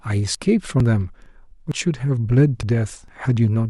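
Skips at 0.35, 0.80, 1.26, 1.72, 2.17, 2.63 and 3.08 s, each dropping about 40 ms of speech: likely audio missing between chunks of half a second.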